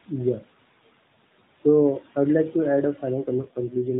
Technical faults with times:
0.00-4.00 noise suppressor artifacts
3.21-4.00 AMR rate drop

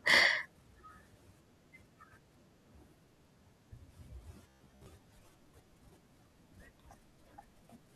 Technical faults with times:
4.49-4.86 robotic sound from repeated short buffers

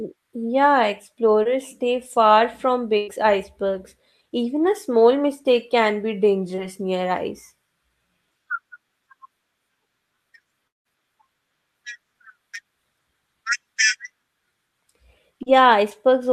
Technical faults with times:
1.43-1.47 short concealed packet loss
2.97-3.09 burst of packet loss
6.55-6.59 short concealed packet loss
10.67-10.87 long network dropout
15.43-15.48 short concealed packet loss

